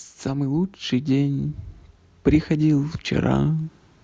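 Automatic gain rising: the gain control judged this speech input too quiet and lifted its gain by about 6 dB from 0.22 to 1.61 s, so voice and background swell together.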